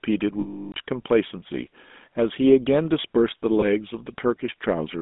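GSM full-rate codec damage runs throughout this speech clip. The speech is confined to a phone-like band of roughly 200 Hz to 3.6 kHz, with a buzzy, gravelly roughness that fits the 13 kbps GSM full-rate codec. That codec rebuilds speech from a vocal-tract model excited by a sparse, regularly spaced pulse train, so the fine detail of the excitation is lost and the result sounds rasping. Lost GSM frames occur from 0.40 to 0.74 s and again from 3.60 to 3.66 s. In the longer gap, which fits about 17 frames, the decoder keeps reusing the parameters of the last good frame. The sound therefore freezes into a rough, metallic ring that is cut to silence after about a third of a second. The later dropout is only a brief ringing blip.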